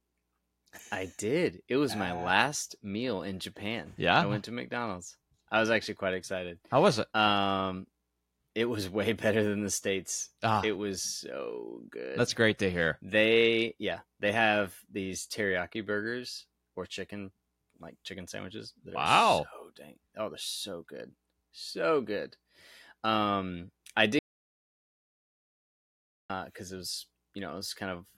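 At 24.19 s the input feeding the recorder was likely cut off, through a disconnected device, a failed link or a mute, while recording carried on writing zeros. The result is an audio dropout to silence: the speech stops abruptly mid-flow and the track goes completely dead, without even room tone, until 26.30 s, when the speech resumes on "uh it was". About 2.1 s of the speech in that stretch is simply missing.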